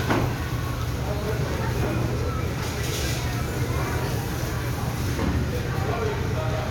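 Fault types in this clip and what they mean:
No faults are audible anywhere in this audio.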